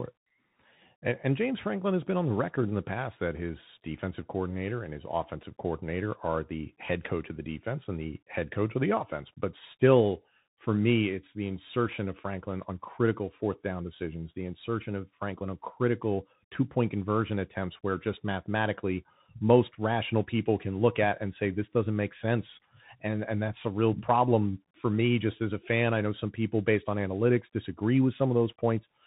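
From start to finish the speech carries plainly audible Bluetooth CVSD headset codec damage. Nothing above 3.8 kHz survives. The one-bit delta coding, which fits a 64 kbps stream, cannot keep pace with loud high-frequency energy, so s sounds turn scratchy over a grainy hiss.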